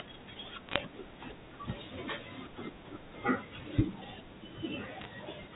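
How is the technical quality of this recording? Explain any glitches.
The recording has two short bursts of digital line errors on top of telephone-band speech, which is limited to 4 kHz, consistent with 64 kbps A-law G.711.

Bit errors on a digital phone line occur from 0.69 to 0.80 s and again from 5.01 to 5.05 s. At a rate of a few bits per thousand, flipped bits corrupt individual logarithmic samples. Hits on the sign or high bits jump the waveform, producing sharp ticks that cluster into brief crackle over the unchanged speech.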